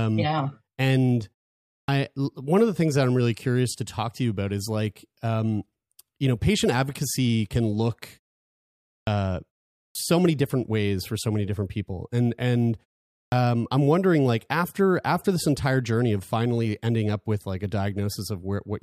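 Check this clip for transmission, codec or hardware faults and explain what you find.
One fault recurs: the output loses the first moment of sound after a pause.

Clipped start after a pause, at 1.84–1.88 s, 9.03–9.07 s, 9.91–9.95 s and 13.28–13.32 s: the output device sleeps during each preceding silence of about 0.5 to 0.9 s and needs roughly 40 ms to wake, so speech bursts in abruptly with its opening sounds missing.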